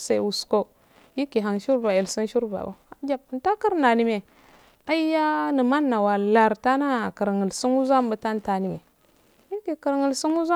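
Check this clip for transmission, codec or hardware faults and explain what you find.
Nothing in this speech recording points to a transmission, codec or hardware fault.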